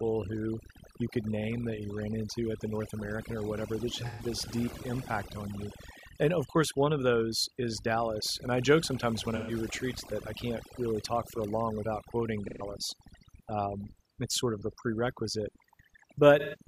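Throughout the speech, the background sinks to near silence dotted with twinkling specks. This is overdone noise removal: the reduction was set so strong that bands near its noise estimate are pushed right down, taking quiet parts of the voice with them.

Brief smeared, phasey patches interrupt the speech at 4.06 s (after "or whatever that just", before "this deep impact on"), 9.35 s (after "I joke sometimes when", before "retreats that I can't"), 12.47 s (after "a long without quoting") and 16.39 s. Each lasts about 0.16 s, which fits a run of three lost frames. This is AAC frame loss with concealment: the decoder filled each gap from the last good spectrum.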